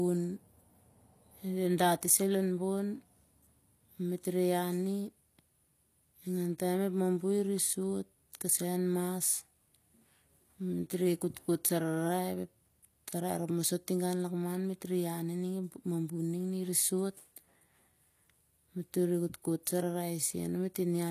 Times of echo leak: none

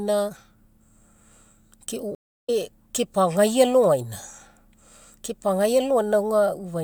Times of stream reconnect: 2.15-2.50

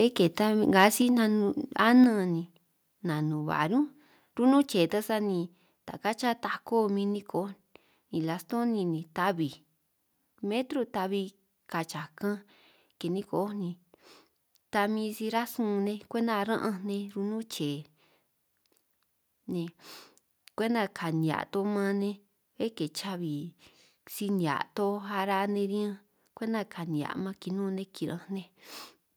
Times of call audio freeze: none

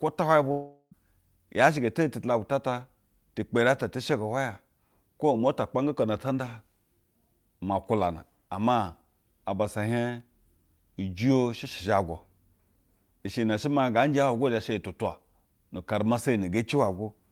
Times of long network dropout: 0.51-0.94

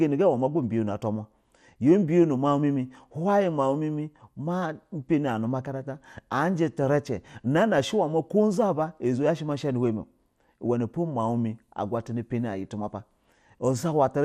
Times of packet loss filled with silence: none

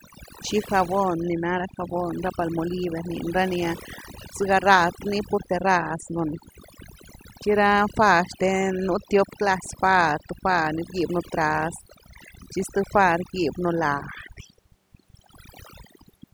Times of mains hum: none

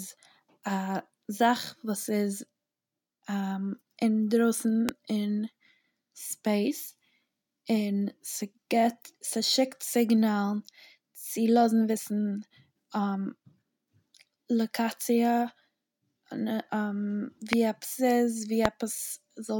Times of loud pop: 4.89-4.91, 17.53-17.55, 18.65-18.67

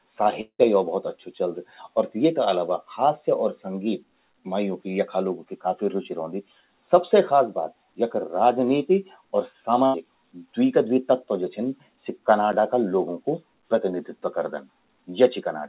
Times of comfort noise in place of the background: none

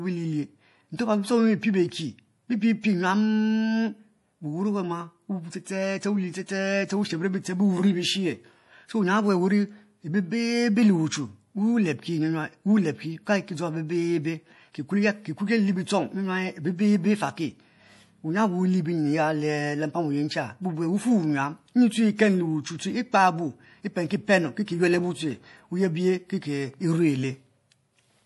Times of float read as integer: none

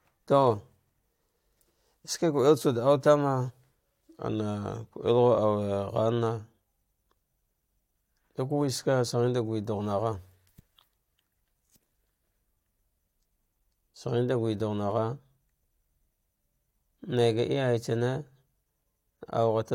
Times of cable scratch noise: none

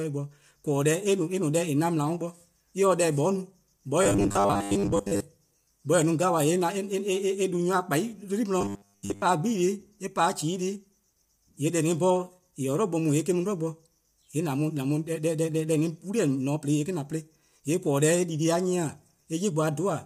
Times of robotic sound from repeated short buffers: 4.03-5.20, 8.61-9.22

